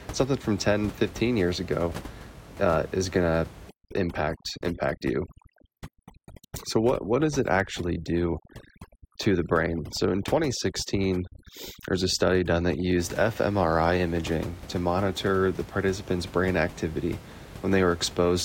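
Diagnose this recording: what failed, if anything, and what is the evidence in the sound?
From 3.69 to 12.99 s, just after "uh is going to", the background breaks up into twinkling near-silence: overdone noise removal in call processing, gating bands near the room-noise estimate, with the room noise about 17 dB below the speech.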